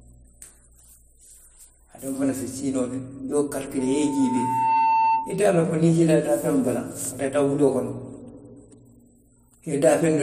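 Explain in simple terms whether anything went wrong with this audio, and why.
From 3.79 to 5.50 s there is loudspeaker feedback squeal: a steady 900 Hz tone swells over roughly a second into a whine. The microphone was picking up its own loudspeaker, and that loop kept reinforcing the one pitch until it squealed.

Between 7.05 and 7.56 s, just after "siita daafeŋo bala", there are CD scratch ticks: three short clicks, each well under a millisecond. A scratch spoiled more data than the player could repair on each turn of the disc, so it patched over the gaps.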